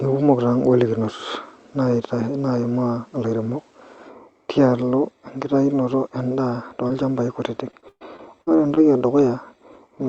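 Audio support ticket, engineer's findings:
Short concealed packet loss, 6.87–6.91 s: audio arrived too late for the decoder, and the receiver extrapolated about 16 ms. The result is a brief smear in the speech.

Repeated packet loss (robotic sound), 7.71–8.78 s: the jitter buffer is repeatedly starved, with concealment patching about a quarter of the span. The speech turns choppy, with pieces missing, the longest hole about 120 ms.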